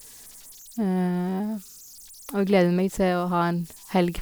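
Throughout, converter idle tones, from an undithered delta-sigma converter's repeating bit patterns, whistle near 7 kHz, about 26 dB down: a narrow pitch, unlike broadband hiss.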